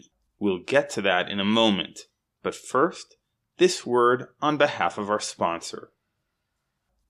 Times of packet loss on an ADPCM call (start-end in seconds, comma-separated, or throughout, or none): none